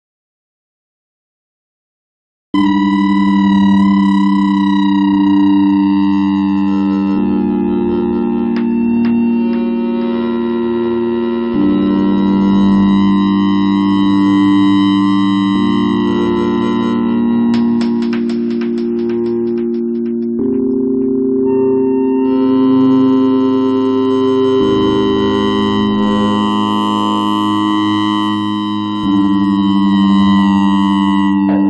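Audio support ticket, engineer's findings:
Silence from 0.00 to 2.54 s, already under way at clip start, with no room tone, then sound enters mid-flow. Audio dropout to silence: input likely lost (unplugged device, failed link or mute) while the recorder kept writing silence. Gap content unrecoverable.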